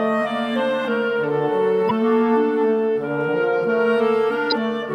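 A short blip cuts across the sound from 1.87 to 1.91 s, and a second one appears from 4.48 to 4.53 s. Both come from damaged data in a compressed stream. A stretch of the encoded bytes was corrupted, so the decoder misread or discarded those frames and lost its place in the stream. It then hunted for the next valid frame header to resynchronise, and that brief garbled output is what is heard as the blip.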